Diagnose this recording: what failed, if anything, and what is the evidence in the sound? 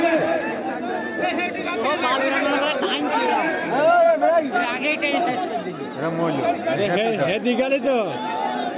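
Nothing in this recording points to a failure at any stage between capture and playback. There is no audible evidence of a fault to trace to a mechanism.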